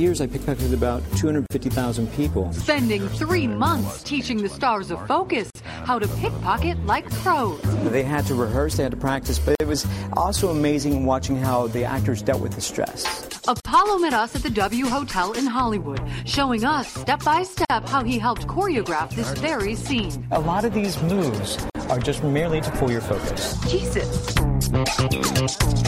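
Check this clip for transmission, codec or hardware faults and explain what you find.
A gap at a join of encoded pieces recurs every 4 s, at 1.46, 5.50, 9.55, 13.60, 17.65 and 21.70 s. Separately encoded pieces were joined untrimmed, leaving encoder delay and end padding in place, so continuous sound drops out for about 40 ms first, then 49 ms, before resuming where it stopped.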